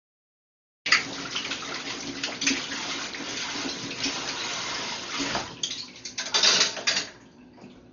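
For the first 0.86 s there is only digital silence, and then the sound jumps in mid-way at 0.86 s with no attack or fade-in. This is a cut-off start: the recording or stream began late, so whatever was already playing is sliced into rather than allowed to build up. On a waveform this shows as a flat silent line ending in an abrupt wall of signal. A spectrogram shows a hard vertical edge, with the first frame possibly smeared across all frequencies by a click.

Across the whole clip the audio sounds dull and choked, with a rough, fluttering grain clinging to tonal parts. This fits Dolby Digital compression at a low bitrate, likely around 40 kbps, with heavy codec damage. Starved of bits, the encoder narrowed the band and left many frequency lines without detail, so the decoder filled them with noise. A spectrogram shows a sharp ceiling with nothing above about 6.9 kHz, and blotchy, speckled patches around steady tones rather than clean harmonic lines.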